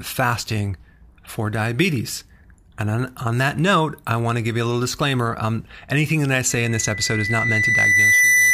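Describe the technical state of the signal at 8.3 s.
Loudspeaker feedback squeal: the microphone re-captures its own loudspeaker, so from 6.50 s to the end a 2 kHz tone swells over about two seconds, rising above the speech.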